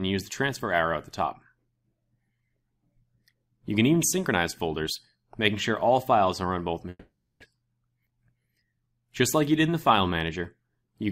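From 6.89 to 7.44 s the audio cuts out in what is likely a long network dropout. The last sound is carried on as a fading buzz or hiss that decays into silence, and when the audio returns about 400 ms of it is simply gone.

From 7.52 to 8.71 s a jitter buffer speed-up follows as the receiver drains the audio that piled up behind the gap. Short pitch-period slices, roughly a tenth of a second in total, are removed, so playback runs at 108% speed with unchanged pitch and sounds hurried.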